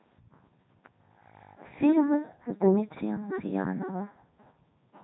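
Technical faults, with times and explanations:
Throughout, Codec 2 vocoder: speech is rebuilt from sine waves using pitch, voicing, energy and spectral envelope only, sounding robotic and buzzy, nothing above 3.8 kHz, consistent with its 3.2 kbit/s mode.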